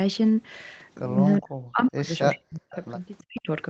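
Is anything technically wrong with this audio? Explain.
Yes. The speech cuts away in three places: from 1.39 to 2.11 s, from 2.32 to 2.73 s, and from 3.28 to 3.48 s. Each time it sinks to near silence, roughly 40 dB down. This is likely speech suppressed in double talk: with both sides talking at once, the echo canceller couldn't tell this talker from loudspeaker echo and turned everything down.

A faint, delayed copy of the speech is also heard, briefly at 2.72 to 2.76 s and again from 3.18 to 3.41 s. It trails the original by 374 ms and sits far below the main speech. This is likely an echo leak: the far end's canceller let part of its loudspeaker pickup through, and that part was sent back.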